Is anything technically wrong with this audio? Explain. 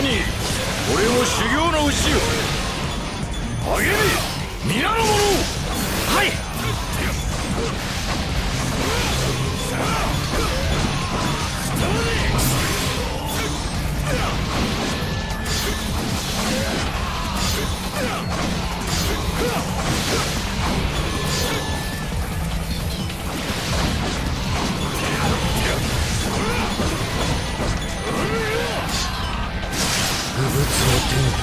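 No, no technical faults heard.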